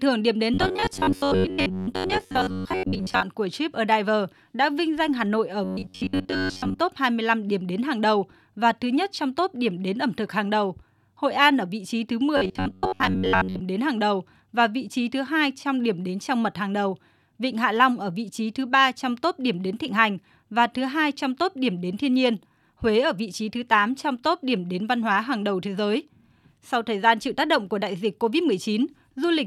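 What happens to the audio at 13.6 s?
Robotic sound from repeated short buffers runs from 12.37 s to 13.61 s, ending there. Audio likely arrived too seldom, so a slice of about 10.7 ms was replayed while most real speech was skipped, leaving a rigid, metallic 93.8 Hz buzz.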